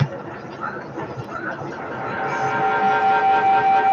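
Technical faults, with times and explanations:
1.72 to 3.93 s, feedback howl: A tone near 700 Hz rises out of the speech and keeps growing. It peaks about 13 dB above the speech level and runs to the end of the clip. The sound passes from a loudspeaker back into a microphone on the same call, gaining level on each trip. The loop favours one frequency, so the repeats narrow into a single ringing pitch. It pulses roughly every 200 ms, the loop's round-trip delay.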